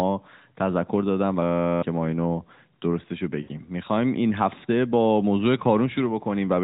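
Speech coded through an AMR narrowband mobile link, band-limited below 4 kHz, is interrupted by a system hang loop from 1.43 to 1.82 s. An 11.6 ms slice repeats as a steady 86 Hz buzz, which fits a 512-sample buffer, and roughly 0.4 s of audio is lost. It is an exact, pitch-steady repetition rather than a silent dropout. At 3.42 to 3.49 s, lost AMR speech frames cost about 60 ms. The sound smears and fades as the decoder extrapolates, instead of cutting abruptly or repeating.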